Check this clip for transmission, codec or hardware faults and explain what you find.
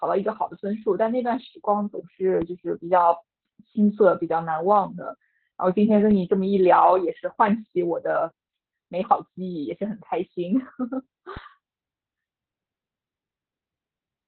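Two faults are present: heavy low-bitrate codec damage throughout the speech, and two separate DC steps.

Opus voice compression affects the whole clip. At 8 kbps the SILK coder runs narrowband, cutting everything above about 4 kHz and quantising the excitation roughly, so the speech sounds muffled, hoarse and faintly robotic. Unlike a simple low-pass filter, it adds that buzzy, synthetic roughness.

A DC step occurs at 2.42 s and again at 11.37 s. Each time, the waveform's zero line jumps abruptly and then drains away through a roughly 5 Hz high-pass, producing a dull low thump. Unlike a dropout or packet-loss click, the speech continues uninterrupted across the step.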